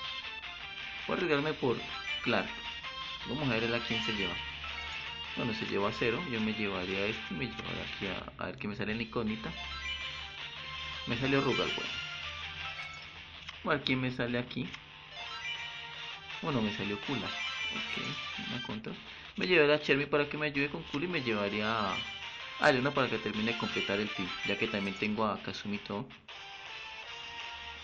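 The audio carries plainly audible MP3 compression damage from start to finish, likely from encoding at a low bitrate, with the sound pointing to something around 64 kbps. Weak detail flickers in and out, giving a watery, swirling texture with metallic chirps on sibilant or bright sounds and softened attacks. On a spectrogram this shows as patchy, blinking holes between frames.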